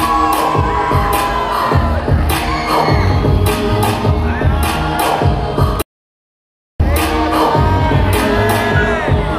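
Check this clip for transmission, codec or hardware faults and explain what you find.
One fault is present. From 5.82 to 6.80 s there is an audio dropout to silence: the sound cuts off abruptly and returns after about 0.98 s of silence, with no room tone. The likely cause is a lost input, such as a disconnected device, a failed link or a mute, while recording continued.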